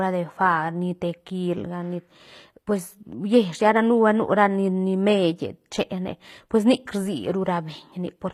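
HE-AAC compression throughout: the treble, cut off above 15.5 kHz, is likely rebuilt from copied lower bands, fitting a low bitrate near 24 kbps, so s sounds turn gritty and metallic.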